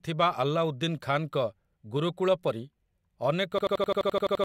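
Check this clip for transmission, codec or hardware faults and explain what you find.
One fault: a system hang loop from 3.58 s to 4.44 s in the speech. The playback system froze while the sound hardware kept replaying its ring buffer, so an 85.3 ms fragment, which fits a 4096-sample buffer, repeats exactly about ten times at 11.7 Hz. It sounds like a machine-gun stutter, and around a second of audio never arrives. On a waveform, identical blocks tile end to end. A spectrogram shows vertical seams at each repeat.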